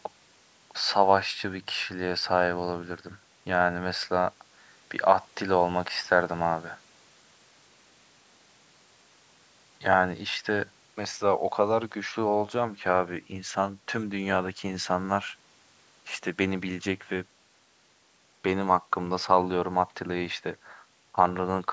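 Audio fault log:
Nothing stood out on listening to this speech clip.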